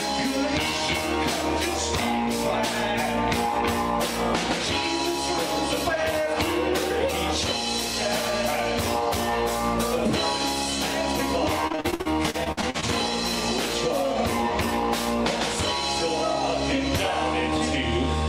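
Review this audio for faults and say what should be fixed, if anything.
Repeated packet loss (robotic sound) from 11.67 to 12.84 s: a dozen or more dropouts, up to 52 ms each, are patched by stretching prior sound, making it choppy. Prevent it with a more stable network path, a deeper jitter buffer, or forward error correction.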